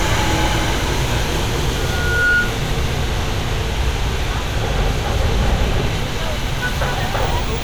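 A recording of sounds with loudspeaker feedback squeal from 1.73 to 2.60 s. A steady 1.4 kHz tone swells over roughly half a second to around 5 dB above the sound. A microphone was picking up its own loudspeaker, and the loop gain exceeded one at that frequency.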